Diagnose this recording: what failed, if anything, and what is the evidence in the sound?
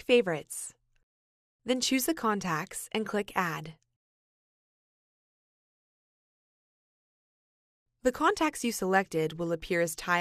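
Nothing failed; no fault is audible anywhere.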